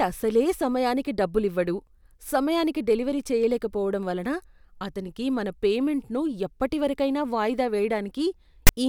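At 8.67 to 8.69 s, file tags are played as audio. A block of text metadata is read as samples, giving a brief, loud, lopsided rasp with hard edges.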